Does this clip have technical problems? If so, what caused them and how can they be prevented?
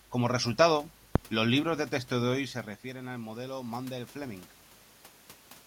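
Yes. From 2.35 to 4.5 s the voice and the room noise behind it swell together, gradually rather than in a jump. This is automatic gain rising. The talker moved away at around 2.5 s, and the input fell by about 13 dB. The automatic gain control read that as too quiet and raised its gain by about 4 dB over roughly two seconds, lifting the background along with the voice. To prevent this, set a fixed input gain or slow the control's response so brief distance changes don't trigger it.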